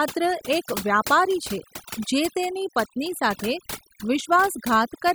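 Overdone noise removal runs through the whole speech clip. A noise reduction stage was pushed too hard. It cut frequency bands near its noise estimate down to nothing. Quiet parts of the voice vanished with them. Gaps drop and break up into twinkling specks.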